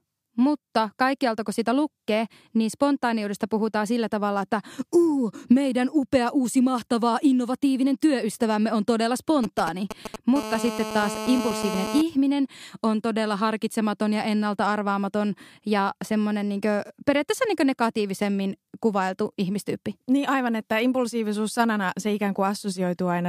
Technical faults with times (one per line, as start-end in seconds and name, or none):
9.44-10.16 GSM signalling bursts
10.36-12.02 GSM phone buzz